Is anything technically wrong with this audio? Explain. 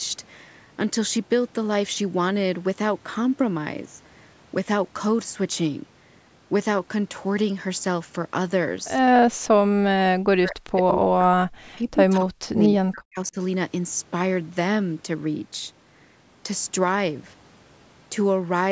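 Yes. From 9.33 to 9.45 s the background is gated by the echo canceller. It clamps the microphone while the loudspeaker plays. The room sound drops about 39 dB, then returns.

From 9.9 to 11.55 s and 11.76 to 13.36 s the speech dips and breaks up, by roughly 40 dB at worst. The likely cause is speech suppressed in double talk. The canceller mistakes the talker for echo when both sides speak. The absence of anything above 8 kHz comes from normal call processing.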